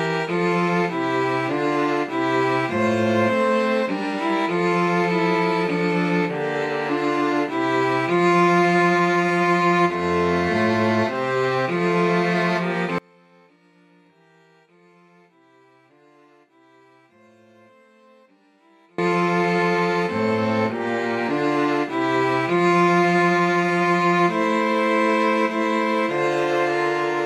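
From 12.98 to 18.98 s the sound drops by about 33 dB and turns faint. That points to one channel inverted. The likely cause is reversed polarity on one stereo channel. Whatever the two sides share cancels in the mono sum.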